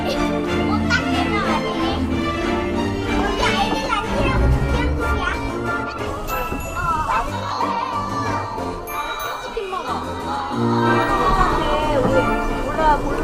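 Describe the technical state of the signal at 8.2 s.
At 8.2 s the signal is intact, with no dropout, clipping, glitch or other transmission fault audible at that moment.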